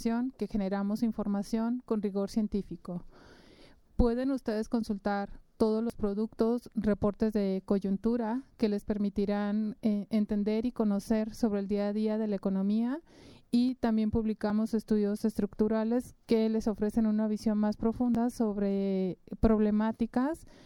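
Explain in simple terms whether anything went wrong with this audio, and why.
The recording system most likely fell behind and missed collecting small chunks of sound before they were overwritten, a fault called a dropped buffer (overrun). Each lost piece is tiny, one to four hundredths of a second, with the largest, at 5.90 s, roughly twice most of the others. The sound on either side is butted together with no gap, so you hear a small jump forward at 5.90, 11.20, 13.69, 14.50 and 18.15 seconds.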